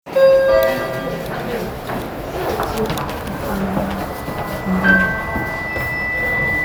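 From 4.09 s to the end of the clip, a loudspeaker feedback squeal takes over. A microphone is picking up the loudspeaker it feeds, and at 2 kHz the loop gain has passed one, so that frequency keeps reinforcing itself. The tone swells over roughly two seconds until it sits at about the level of the sound itself. That gradual build on one fixed pitch sets it apart from a steady interference whine, which would appear at full strength immediately.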